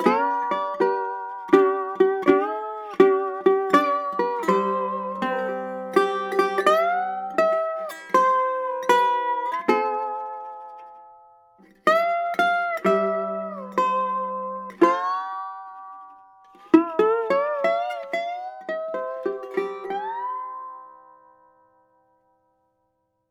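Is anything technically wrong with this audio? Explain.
No, nothing technically wrong.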